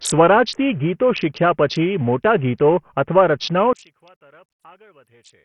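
Bluetooth SBC compression runs through the whole recording: the speech is coarsely quantised, with a gritty, grainy edge and nothing above 11.8 kHz. This is likely a heavily starved SBC bit pool, fitting a rate around 48 kbps, leaving the top sub-bands without bits.

One channel inverted from 3.73 s to the end at 5.44 s: when the channels are summed to mono, the shared centre content cancels and the speech drops by about 31 dB, leaving only a faint residue. The likely cause is reversed polarity on one stereo side.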